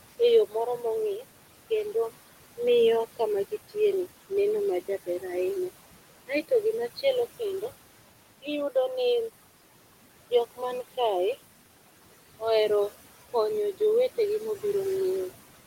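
Noise suppressor artifacts run through the whole speech clip. The suppressor pulls down the bands it judges to be steady noise by about 17 dB, so the room noise, which sits about 14 dB below the speech, drops away in the gaps and swells back up under the talker, as the gain shifts frame to frame.

From 0.48 to 0.84 s the suppressor mistakes part of the speech for noise, producing speech cut by the noise suppressor. Low-level speech energy falls below its threshold and is turned down along with the background, by up to about 16 dB at the deepest point. Only parts of that stretch are affected, adding up to roughly 150 ms, and there the speech sounds swallowed and faint rather than fully articulated.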